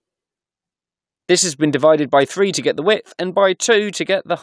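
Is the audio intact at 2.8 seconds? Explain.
Yes, the audio at 2.8 seconds is intact, with no dropout, click, distortion or other fault at that moment.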